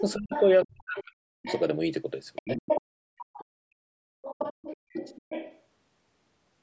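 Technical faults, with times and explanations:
0.0–1.61 s, 2.35–3.45 s and 4.23–5.59 s, other side's voice leaking through: a second voice runs under the speech, about 15 dB below it in the first and last stretches and only about 5 dB below in the middle one. This is likely loudspeaker playback that the echo canceller left in the microphone signal. Unlike a dropout, sound is added rather than lost.
0.14–1.47 s, 2.41–2.61 s and 4.16–5.0 s, speech suppressed in double talk: the main talker's level drops sharply, by around 40 dB at its deepest in the first and third spans (about a second and half a second affected) and around 25 dB briefly in the second. The drops coincide with the leaking voice. This points likely to the echo canceller turning everything down while both sides talk. Unlike a packet dropout, the dips follow the overlap rather than a regular rhythm.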